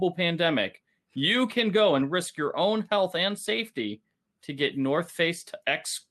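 No technical faults are audible.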